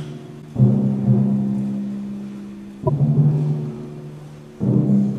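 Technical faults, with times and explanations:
0.38 to 0.44 s and 2.84 to 2.89 s, damaged data in a compressed stream: two brief faults of about 60 ms each, where corrupted bytes in the coded stream made the decoder misread its frames, lose sync and hunt for the next valid frame header. They differ from a plain dropout or packet-loss gap because the decoder misread corrupted bytes rather than simply missing data.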